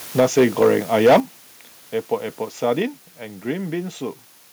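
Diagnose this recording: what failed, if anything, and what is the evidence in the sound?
There's a steady, even hiss under the whole recording, sitting only roughly 25 dB below the speech, with no grit or distortion riding on it. That's the signature of low bit depth with dither, which points to the sample-format conversion stage. Something reduced the audio to about 7 bits and added dither before rounding, so the quantisation error became flat white noise instead of harmonic crunch.

From 0.18 to 1.17 s the loudest syllables have a harsh, crackly edge, with peaks pushing about 9 dB past full scale and roughly 7% of samples flattened. That's microphone overload at the converter input. The mic gain was likely set too hot, so the tops of the waveform got sliced off at the converter's ceiling, and those squared-off peaks are what give it that brittle crackle.

Speech and background together drop suddenly by about 4 dB at 0.2 s, then again by about 8 dB at 1.2 s, right as the overloaded stretch ends. 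That's the microphone volume stepped down, and the cause is likely the call processing's automatic gain control. It reacted to the clipping by cutting the device's input level in discrete jumps, which is why the level falls in steps rather than easing down.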